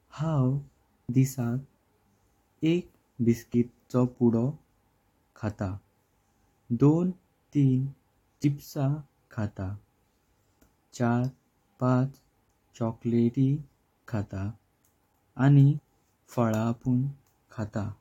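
At 1.09, 3.54 and 8.44 s the speech skips forward, with audio missing between chunks, about 50 ms each time, likely where a recorder working in 2.5 s chunks lost sound at each handover. The two sides join directly, with no silent gap as a dropout would leave.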